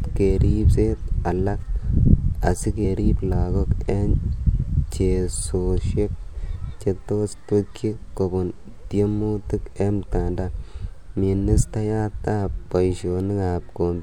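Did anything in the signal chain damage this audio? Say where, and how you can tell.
Yes: smeared blips at 0.72, 2.84 and 4.38 s jump the speech ahead by about 100, 70 and 50 ms, which is compressed frames skipped at the codec.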